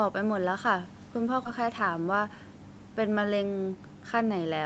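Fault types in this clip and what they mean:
Echo leak: A very faint copy of the speech returns about 0.43 s late around 0.94 to 1.0 s, likely from a loudspeaker echo not fully cancelled.
Skip ahead: At 1.45 to 1.47 s the speech lurches forward with no gap. Roughly 0.4 s of audio was dropped and the two sides joined directly.
Jitter buffer speed-up: Between 2.05 and 2.36 s the speech runs 13% faster at unchanged pitch. Short pitch-period slices, about a twentieth of a second in total, were removed to reduce delay.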